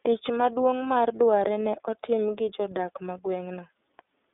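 The speech runs through the iLBC codec for its whole length. Nothing passes above about 3.7 kHz, leaving a thin telephone band. Each frame's excitation is coded on its own, giving a rough, synthetic edge. That fits 30 ms frames at 13.33 kbps.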